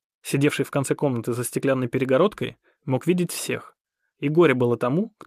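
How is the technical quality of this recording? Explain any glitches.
Nothing here sounds like a glitch; the audio runs smoothly the whole way, without any dropouts, clicks or other technical hiccups to point to.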